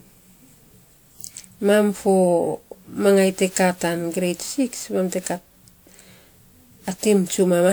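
Throughout, the speech sounds swirly and hollow with smeared attacks. The spectrogram shows a 20.1 kHz ceiling, likely generation loss from repeated WMA re-encoding.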